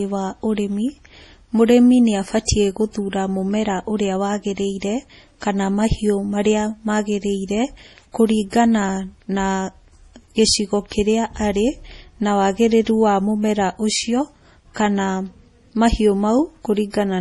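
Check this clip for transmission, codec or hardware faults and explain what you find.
One codec fault runs through the whole recording: MP3 compression. The speech sounds watery and swirly, with chirpy s sounds and blurred consonant onsets, likely from an encoder starved at a low bitrate around 32 kbps, zeroing weak frequency lines frame by frame and cutting everything above 11.5 kHz. A spectrogram shows a flat ceiling at 11.5 kHz and patchy, flickering holes below it.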